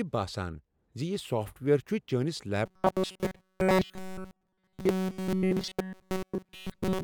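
From 2.66 s to the end, the speech takes on robotic sound from repeated short buffers: a rigid, metallic buzz fixed at 188 Hz, likely from a stretch of about 5.3 ms being looped throughout while fresh audio is skipped. Unlike dropouts, there are no silent gaps.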